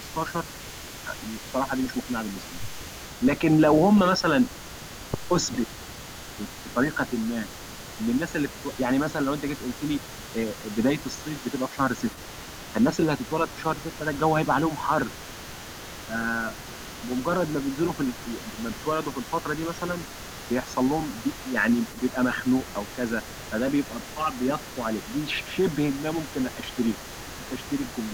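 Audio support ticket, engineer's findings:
Echo leak, throughout (0.0 to 28.1 s): faint delayed copy of the speech trailing by about 409 ms, roughly 20 dB under the direct signal. Likely far-end loudspeaker pickup that the echo canceller failed to fully remove, returned down the line.

Speech suppressed in double talk, 25.49 to 25.58 s and 26.67 to 26.71 s: brief level dips of about 5 dB during overlapping talk. Likely the echo canceller confusing local speech with echo and attenuating both.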